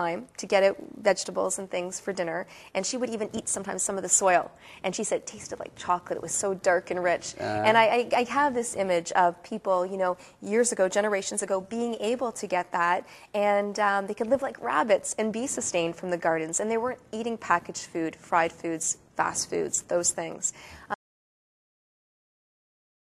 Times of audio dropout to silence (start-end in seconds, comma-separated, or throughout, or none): 20.94-23.06